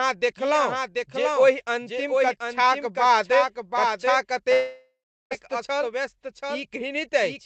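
Speech, with a doubled audio track throughout: a second full-band copy roughly 0.7 s behind and about 5 dB quieter, likely from the sound being captured again by a slower path. On a spectrogram every syllable's pattern repeats a fixed distance later, fainter and with no reverberant smear, and the waveform shows overlapping envelopes. A long network dropout runs from 4.53 to 5.33 s, right after "अन्तिम कक्षाक बाद कक्षा", likely from packets never arriving. The receiver stretches the last sound into a fading buzz, then about 0.39 s of near-silence follows before the speech resumes with that stretch missing. On the waveform this appears as a shrinking smear, then a flat gap. On the spectrogram the blurred band fades out into an empty column.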